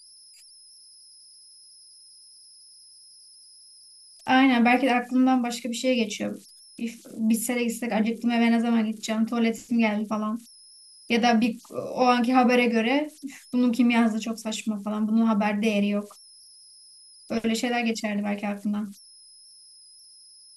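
Throughout the speech, converter idle tones sit under the signal: a whistle around 5 kHz, about 29 dB below the speech, clearest in the pauses and turning to a grainy hiss beneath quieter passages. Without dither, the delta-sigma converter settles into repeating bit patterns whenever its input is small, and those patterns produce this tone. A spectrogram shows a thin horizontal line near 5 kHz running the full clip, and the waveform's pauses never reach true silence.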